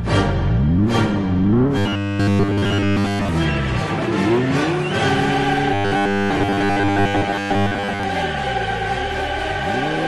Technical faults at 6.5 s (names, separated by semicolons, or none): robotic sound from repeated short buffers